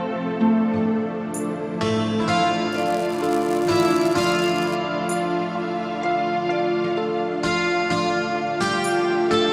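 Filter restarted on every block, from 2.73 to 4.76 s: a filter in the processing chain loses its internal state at each block boundary and begins every block as though the input before it had been silent. Each restart leaves a small transient. The transients recur every 5 ms and produce a 200 Hz buzz laid over the sound. The buzz grows louder and softer with the level of the audio beneath it and stops at 4.76 s.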